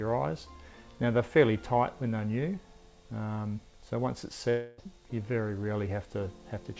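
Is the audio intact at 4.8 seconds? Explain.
No. A long network dropout runs from 4.50 to 4.80 s, ending right at that moment. Audio likely stopped arriving, so the receiver stretched the last sound into a fading buzz or hiss across the whole 0.28 s gap; playback then resumes without the lost section.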